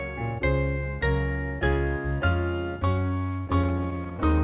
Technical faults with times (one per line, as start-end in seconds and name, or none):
3.00-4.33 repeated stalls (stutter)